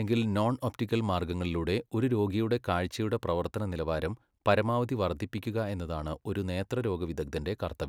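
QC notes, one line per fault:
No faults found in this speech clip.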